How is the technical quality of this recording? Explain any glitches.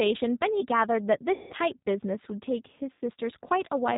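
The technical quality is poor. The speech runs through a low-bitrate codec from start to finish, and it breaks up twice where packets went missing.

The G.729 codec is audible throughout. The sound points to G.729A at about 8 kbit/s. It rebuilds the voice from a vocal tract filter, a pitch predictor and a few pulses per frame. Nothing above 4 kHz survives. The voice stays intelligible but sounds rough and plainly synthetic.

VoIP packet loss concealed by the speech codec occurs twice. The first is from 1.33 to 1.53 s. About 180 ms of audio is gone, which fits nine 20 ms packets. The second is from 2.93 to 3.01 s, with about 80 ms lost, consistent with four packets. In each gap the decoder repeats its last pitch and filter at falling gain. The voice smears into a fading sound. It stays weak briefly after packets return.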